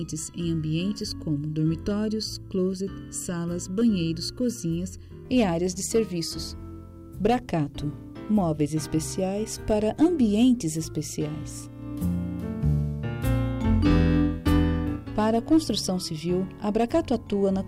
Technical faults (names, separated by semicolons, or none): channel delay (comb filtering)